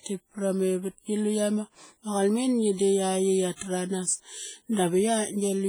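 A ringing, washy character runs through the whole speech clip, with a hiss that swells and fades along with the voice and thin, hollow gaps where quieter detail has dropped away. This is likely WMA compression: a transform codec working in long blocks smears its quantisation noise across tens of milliseconds and zeroes weak spectral lines outright, and the heavy damage points to a low bitrate of around 24 kbps.

From 3.56 to 3.61 s a short burst of hiss arrives just before a sharp attack, which then lands soft and blurred rather than crisp. This is pre-echo. The attack fell late within a codec block, so the noise sized for the loud onset was spread evenly back through the quiet moment ahead of it, about 54 ms of it, making the noise audible before the sound it belongs to.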